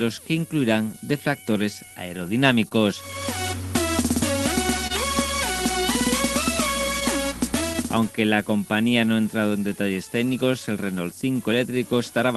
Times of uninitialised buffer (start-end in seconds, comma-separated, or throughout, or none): none